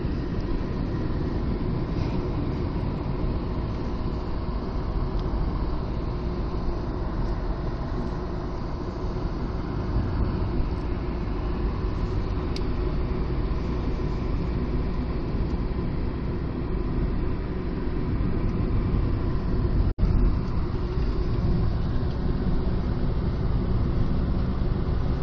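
A digital broadcast dropout interrupts the audio from 19.91 to 19.99 s. The sound fades out over about 8 ms, then holds silence for roughly 64 ms, which fits two lost frames that the receiver muted after the signal or checksum failed. It resumes later in the programme, and the audio in the gap is gone. A spectrogram shows a narrow, fully blank vertical band across all frequencies, and the waveform drops to a brief flat line.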